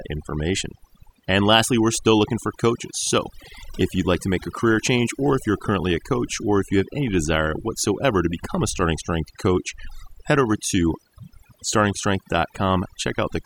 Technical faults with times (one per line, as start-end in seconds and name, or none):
0.00-13.46 overdone noise removal